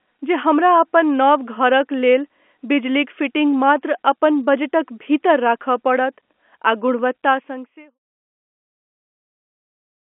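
No technical faults are audible anywhere in this speech recording.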